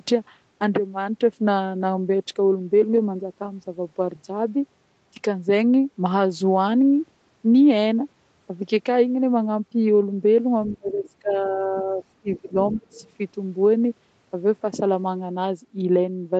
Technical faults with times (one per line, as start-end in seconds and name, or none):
10.69-10.75 other side's voice leaking through
10.73-12.95 speech suppressed in double talk
12.67-13.11 other side's voice leaking through